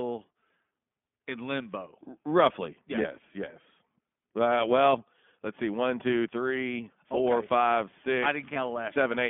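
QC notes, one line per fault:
throughout, iLBC codec: the speech is confined to a narrowband telephone line of about 150 Hz to 3.5 kHz, so nothing above that survives, and each 20 ms frame's excitation is coded on its own at 15.2 kbps, leaving the voice plainly rough and slightly synthetic.
3.02 s and 8.54 s, lost iLBC frames: a single 20 ms frame drops at each point, the second just after "four okay five six", and the decoder fills it by repeating the last pitch cycle with added noise, heard as a brief buzzy held vowel before clean frames resume.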